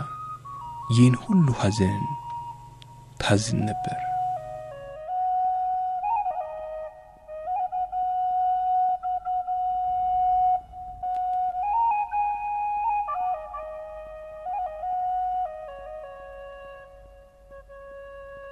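No faults are audible anywhere in the clip.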